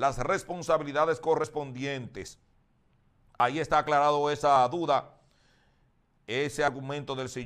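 Dropped buffers, likely from an overrun, at 1.44, 2.28, 3.4, 4.56 and 6.68 s: each time a block of samples was overwritten before being read, so roughly 40 ms vanishes and the sound jumps ahead, no gap.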